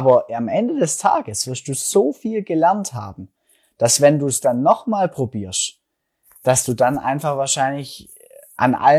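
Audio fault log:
No faults are audible in this speech recording.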